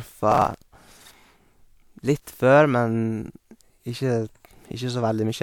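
From 0.32 to 0.91 s the speech is torn by processor overload crackle: dozens of very short buffers, each a few milliseconds, miss their deadline and are skipped. Unlike a single dropout, the crackle forms one dense, gritty burst that then stops cleanly.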